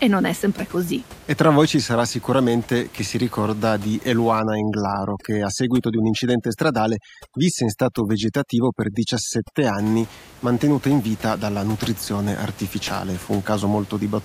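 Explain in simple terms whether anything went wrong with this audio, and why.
From 4.39 to 9.79 seconds, overdone noise removal sets in: the room noise drops and breaks up into twinkling, warbling specks, and the speech loses its quiet parts too. Unlike plain muffling, the background itself breaks up, then returns after 9.79 s.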